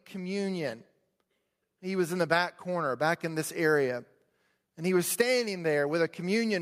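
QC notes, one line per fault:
0.12–0.88 s, automatic gain rising: over these 0.76 s the level climbs steadily by about 4 dB, and the speech and the room noise beneath it swell together rather than the voice alone getting louder. The gain control judged the incoming signal too quiet at the start and pushed its gain up gradually to compensate. Because it scales the whole input, the background floor lifts in step with the speech.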